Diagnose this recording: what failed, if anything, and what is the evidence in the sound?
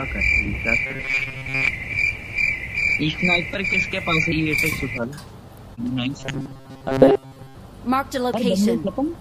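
Robotic sound from repeated short buffers occurs from 0.87 to 1.69 s and again from 6.20 to 7.55 s. In both spans the sound turns into a rigid, metallic buzz fixed at 134 Hz, and most of the original audio is missing. The likely cause is a driver or buffer underrun. New data arrived too slowly, so the same segment of about 7.5 ms was replayed over and over, and that loop length sets the buzz pitch.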